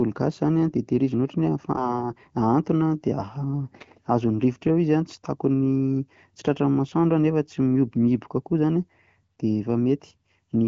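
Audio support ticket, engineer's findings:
AMR bit errors, 1.76 to 2.11 s: speech turns hoarse, scratchy and gargly for about a third of a second, pitch and level roughly held. Fits about three AMR-WB frames carrying flipped low-protection bits at a few percent error rate. Unlike lost-frame concealment, no gap, muting or smeared repeat.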